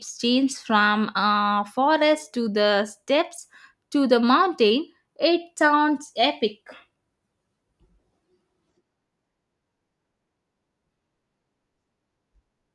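No technical fault can be heard anywhere in this speech recording; the signal stays continuous and intact throughout.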